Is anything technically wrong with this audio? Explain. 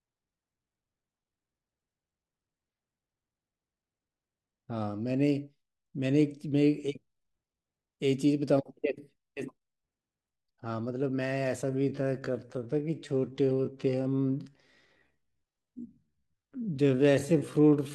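Yes. From 11.61 s to the end, a time-stretched section: software likely stretched this part of the speech to fill a longer slot, repeating short pieces to hold pitch. The pace abruptly drops to about 0.65 times normal, dragging at unchanged pitch.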